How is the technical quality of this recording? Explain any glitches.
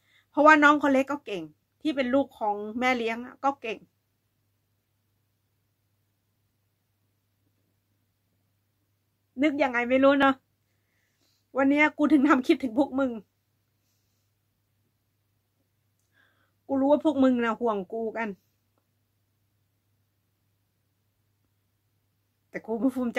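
Two brief glitches break the recording. At 6.36 s the sound lurches forward by a sliver, roughly 5 ms; at 10.23 s the same happens with a bigger jump, about 10 ms. Neither leaves a gap of silence. The likely cause is a dropped buffer (overrun): the recording software fell behind, the hardware overwrote a block of samples before it was collected, and the audio on either side was spliced straight together.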